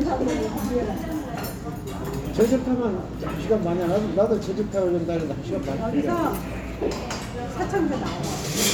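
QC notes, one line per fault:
No faults found in this recording of sounds. Nothing in it calls for a timed entry.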